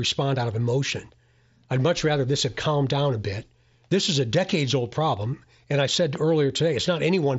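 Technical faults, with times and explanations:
6.15–6.18 s, loud pop: a single sharp click standing a few dB above the speech, likely a brief voltage spike from a switch or static discharge.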